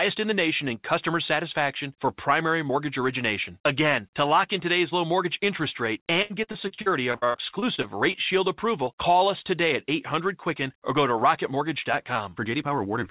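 From 6.22 to 8.16 s, right after "low mortgage interest rate", there is repeated packet loss with a robotic sound. Over a dozen holes arrive in quick succession, the longest 77 ms. Each is patched by stretching the previous sound, so about a quarter of the span is filler. The speech turns choppy and robotic.

At 8.85 to 8.89 s, just before "call us today at", a short concealed packet loss occurs. About 20 ms of audio went missing. The receiver bridged it by extending the last sound before blending back. It comes across as a brief smear or wobble.

Throughout, nothing reaches above 4 kHz, which points to a narrowband G.711 call codec.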